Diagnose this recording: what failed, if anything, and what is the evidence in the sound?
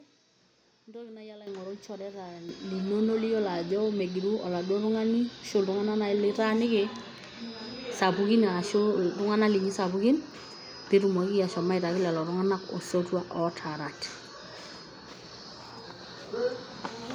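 Speech and background together jump sharply louder at 1.47 s, just after "naaji alo", by about 11 dB, then again at 2.49 s after "ilchoreta", by about 8 dB. This is the microphone volume being stepped up: call processing judged the input too quiet and raised the device's input gain in single jumps.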